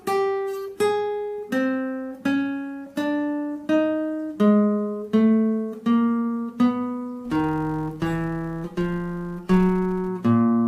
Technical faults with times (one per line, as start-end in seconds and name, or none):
7.25-10.09 filter restarted on every block